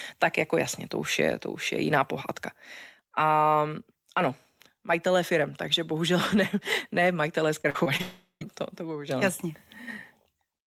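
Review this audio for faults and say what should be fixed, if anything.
Repeated packet loss (robotic sound) runs from 7.61 to 8.01 s, right after "ne ne majitelé". Packets failed to arrive in time four times in quick succession, with the longest hole 42 ms. The receiver covered each one by stretching the preceding audio, so about a quarter of that span, roughly 100 ms, is synthetic fill. The speech there sounds choppy, with fragments missing between the patched pieces.

A long network dropout follows directly, from 8.01 to 8.43 s, ending before "to to bohužel". The link most likely stopped delivering audio entirely for about 400 ms, and that stretch of speech is gone. The receiver first extended the last sound as a fading buzz or hiss, and then, for the final 130 ms, only silence is heard. The speech resumes at a later point, with the lost portion simply skipped rather than delayed.

Preventing both faults means giving the connection more headroom, through a steadier or less congested network path, a larger adaptive jitter buffer, and forward error correction or redundancy so that short losses can be rebuilt instead of concealed.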